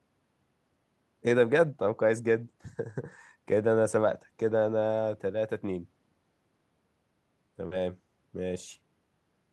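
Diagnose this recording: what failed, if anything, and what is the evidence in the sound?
Network stage: short concealed packet loss at 7.67 to 7.73 s. About 40 ms of speech never arrived, and the receiver bridged it by extending the preceding sound before blending back. That produces a brief smear rather than a clean dropout or click.

Network and codec stage: a lost packet rebuilt from error correction at 7.71 to 7.73 s. The 20 ms stretch sounds rougher and noisier, not invented, which fits a single frame decoded from the low-bitrate redundant copy carried in the next packet.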